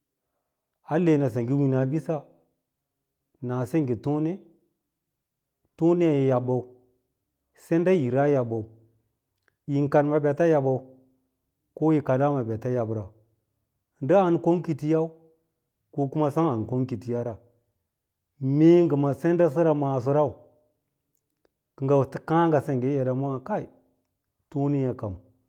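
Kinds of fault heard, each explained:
No technical fault can be heard anywhere in the speech recording.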